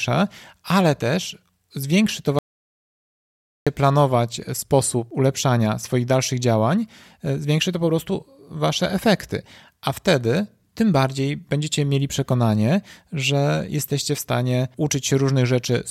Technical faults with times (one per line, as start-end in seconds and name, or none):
2.39-3.67 audio dropout to silence